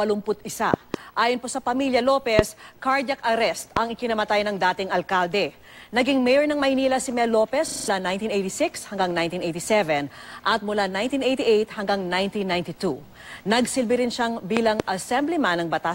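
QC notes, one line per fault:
0.74–0.96, 2.39, 3.77, 14.57–14.82: loud pops, doubled at the first and last, about 20 dB above the signal, likely voltage transients from a switch or static.
7.68–7.88: system hang loop, one 40 ms slice repeating five times as a 25 Hz stutter while the output kept cycling a frozen buffer.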